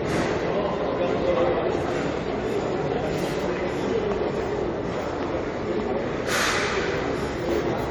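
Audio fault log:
throughout, generation loss: the audio was likely decoded and re-encoded about three times with a lossy codec, fitting AAC-LC at 64 kbit/s, each pass re-quantising on a shifted frame grid, so noise and spectral holes accumulate into a swirly, hollow smear with blurred attacks.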